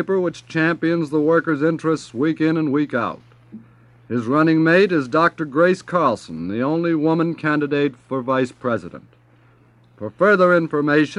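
No audible technical faults.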